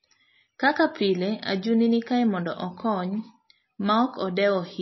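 Speech throughout, with watery, swirling artefacts and nothing above 5.8 kHz; that is likely MP3 compression, at a bitrate that fits about 24 kbps.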